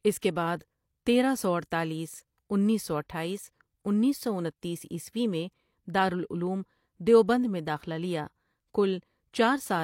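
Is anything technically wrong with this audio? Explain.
Yes, there is pre-echo at about 0.59 to 0.61 s, just before "تیرہ سو اڈتالیس انیس". A sharp onset in the speech lands late within a transform block, and the codec's quantisation noise, spread across the whole block and scaled for the loud attack, leaks into the quiet moment ahead of it. The result is a brief hiss, about 21 ms long, preceding the onset, which then sounds softened and smeared rather than crisp.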